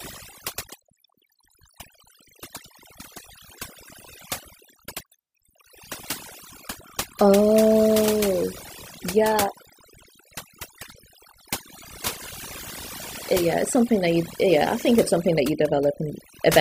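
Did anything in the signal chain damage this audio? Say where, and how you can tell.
Yes, overdone noise removal damages the speech throughout. A noise-reduction stage set far too aggressively is muting individual frequency bands whenever they drop near its noise estimate. The pauses fall to near silence with twinkling specks, and quieter parts of the voice are cut along with the noise. A low-bitrate codec also sounds swirly, but it leaves the background hiss in place.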